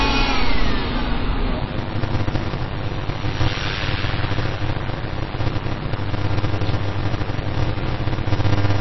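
From the start the sound is dull and watery, with nothing above 5.8 kHz and weak detail swirling in and out, which points to MP3 compression, likely at a low rate around 24 kbps. The frame-to-frame flicker of thin components separates it from a simple low-pass filter.

At 1.59 s a block size mismatch (padded) begins and lasts to the end. Each short block, which fits 256 written samples, is topped up with silence, so a steady 100 Hz buzz appears and the audio slows to 0.533 times its normal speed while its timbre stays the same. A resampling error would shift the pitch along with the speed.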